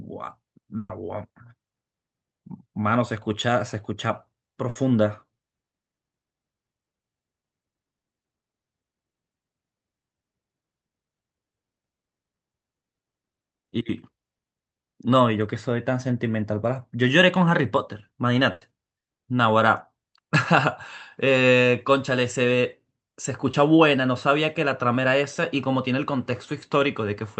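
Three bursts of packet loss interrupt the speech, at 0.77 to 0.91 s, 4.69 to 4.77 s and 18.51 to 18.63 s. Each time the receiver stretched the last sound into a decaying buzz or hiss for about 120, 60 and 100 ms, and the real audio from those stretches never returns. The first burst ends in a brief near-silence. On a spectrogram each burst is a smeared, repeating band that fades before the speech resumes abruptly.

At 23.51 to 23.55 s a short concealed packet loss fills about 20 ms with a continuation of the preceding sound. It is heard as a quick smear or wobble, and it shows as a tiny blurred patch in the waveform's envelope.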